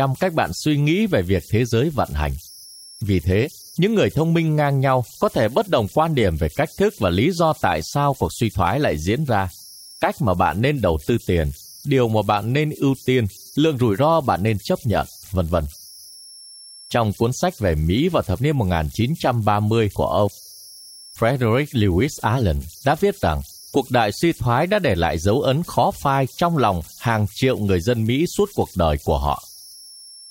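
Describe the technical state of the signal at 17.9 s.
A whistle near 5 kHz and grainy noise, about 26 dB below the speech, run through the whole clip: converter idle tones from an undithered delta-sigma converter cycling through repeating bit patterns.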